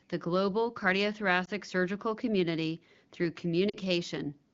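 At 1.45 to 1.50 s the speech briefly dips or warbles. This is lost AMR speech frames. The gap fits one 20 ms frame that failed its checksum. The decoder filled it by repeating the last good pitch and vocal tract settings at lower gain. At 3.69 to 3.77 s a longer gap, fitting two frames or 40 ms, drops the sound to near silence before it recovers. The surrounding speech has the clear wideband quality of the HD Voice codec.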